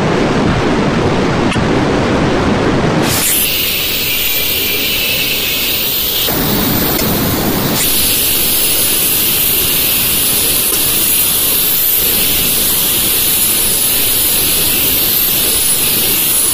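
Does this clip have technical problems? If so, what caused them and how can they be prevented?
Yes. Three brief bursts of damaged data in a compressed stream, at 1.48 to 1.56 s, 6.94 to 7.02 s and 10.67 to 10.76 s, each about 80 ms. Corrupted bytes make the decoder misread frames and lose sync until it finds the next valid frame header, giving a short chirp or squawk. A spectrogram would show narrow vertical smears of broadband energy, and the waveform abrupt, jagged segments. Checksummed transfer and verified storage of the encoded file would prevent this.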